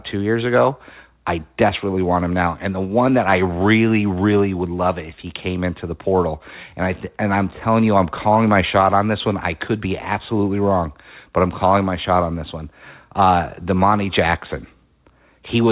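Speech arrives over a narrowband call path with nothing above 4 kHz, which fits a telephone codec such as G.711 mu-law, and no technical faults are present in the signal.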